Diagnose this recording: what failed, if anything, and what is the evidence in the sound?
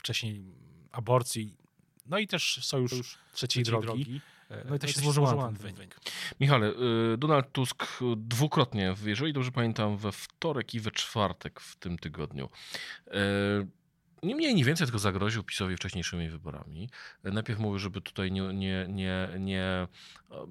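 From 2.92 s to 5.90 s the speech is heard twice. A second, full-band copy trails the original by roughly 150 ms and sits around 5 dB below it. It has no decay and no added room colour. It switches on and off abruptly at both ends. This is a doubled audio track. The likely cause is in routing or call processing, where the same signal reaches the mix a second time through a slower path.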